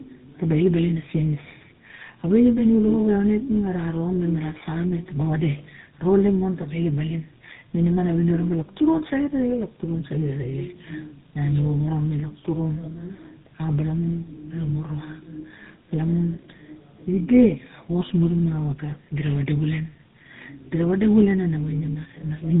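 Throughout, tandem speech coding runs the speech through two codecs, the second recoding the first's damage: rough, warbly, muffled, with nothing above 3.8 kHz.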